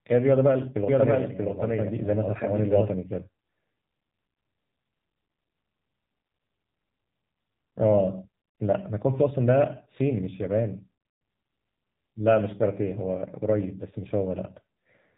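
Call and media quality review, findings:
AMR narrowband mobile codec, whole clip: speech passed through AMR-NB at a low rate, damage consistent with about 7.4 kbps. Nothing above 3.8 kHz; buzzy, synthetic vocal-tract rendering, thin narrowband tone.

Doubled audio track, 0.88 to 2.88 s: likely a second, slower capture path or edit mixing the same audio back in. Full-band copy at roughly equal level, around 0.7 s behind, dry, starting and stopping abruptly.

Periodic USB or driver dropouts, 3.47 to 6.9 s: bus or driver stalled at a fixed interval, roughly 10 ms of audio skipped each time. Regular ticks every 0.49 s, about seven, heard over the speech.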